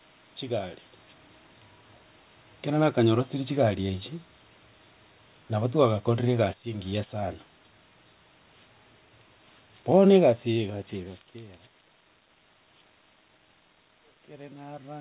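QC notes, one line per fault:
5.55 to 7.19 s, automatic gain falling: the level sags gradually by about 4 dB over roughly 1.6 s. The gain control judged the input too loud and pulled its gain down step by step. Because it scales the whole signal, the room noise drops in step with the speech. That shared drop is what separates it from a talker leaning away, which would leave the background level unchanged.
6.59 to 7.44 s, automatic gain rising: before the fall has finished, the control reverses and lifts its gain by about 5 dB over under a second. The speech and the room noise swell back together and end slightly above their earlier level. The overlap with the preceding fall makes the control sound as if it is hunting, correcting one way and then overshooting the other within about two seconds.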